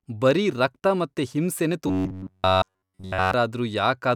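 From 1.87 s to 3.34 s, right after "ಬರೀ ರಕ್ತ ಮತ್ತೆ ಹಿಂಸೆನೇ", the speech collapses into robotic sound from repeated short buffers. Across essentially the whole stretch, a short chunk of audio is replayed in place of fresh signal, imposing a rigid buzz at 93.8 Hz, which points to segments of about 10.7 ms. The likely cause is audio arriving too seldom, with playback looping the last buffer while the real material is skipped. The result is a flat, metallic drone that only loosely tracks the speech.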